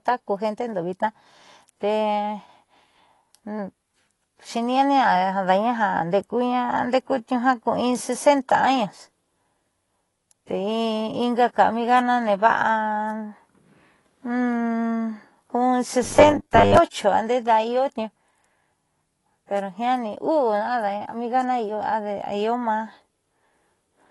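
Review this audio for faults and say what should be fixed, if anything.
The speech has nothing above about 11.5 kHz, leaving it dull, with a smeared, fizzy edge on sibilants and a warbling texture on sustained vowels. This is likely AAC compression: the encoder spent too few bits on the high bands, so it dropped them and coarsely quantised the rest. The damage is plainly audible throughout and fits a bitrate near 32 kbps. To prevent it, encode at a higher bitrate or use a codec suited to low-rate speech.

From 16.03 to 16.77 s, about 0.74 s, the speech turns into a rigid metallic buzz at 100 Hz that only loosely tracks the speech. This is likely robotic sound from repeated short buffers. When fresh audio arrives too slowly, the playback path loops the last block, and a 100 Hz repeat rate implies 10 ms blocks. Roughly half the audio in that span is repetition, and the real signal is skipped. 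To prevent it, enlarge the input buffer or fix the stall upstream so data arrives on time.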